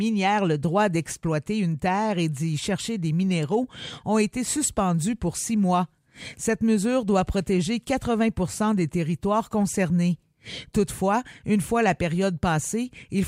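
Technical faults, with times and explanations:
No technical faults can be heard in this clip.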